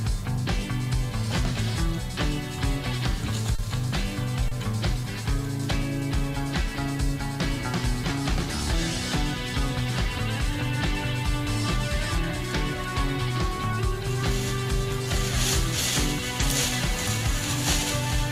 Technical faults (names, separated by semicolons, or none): short stall from a late packet